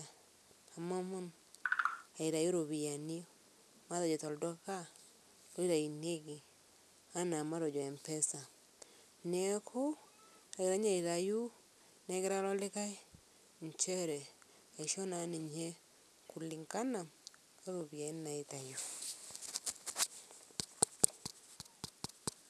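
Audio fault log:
Throughout, aliasing: the speech was brought down to a lower rate, pointing to 48 kHz reduced to 24 kHz, with no filter removing content above the new 12 kHz limit. Energy that lay above 12 kHz folds back below it at unrelated frequencies, so sibilants sound gritty and metallic. The folded content sits only modestly beneath the signal, at roughly -15 dB. On a spectrogram the energy runs hard up to 12 kHz, with mirrored streaks below that edge.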